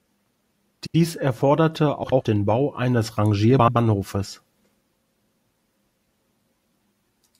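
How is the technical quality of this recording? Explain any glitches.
The speech is marred by four brief glitches of the same kind, frames out of order, at 0.83–0.95 s, 2.04–2.21 s, 3.59–3.77 s and 5.18–5.35 s. Each is a garbled flutter. Two neighbouring blocks of about 85 ms were decoded in swapped order, so each stretch plays with its halves exchanged, though no time is lost.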